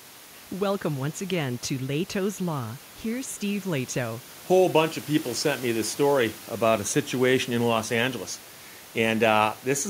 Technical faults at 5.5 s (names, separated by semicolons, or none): none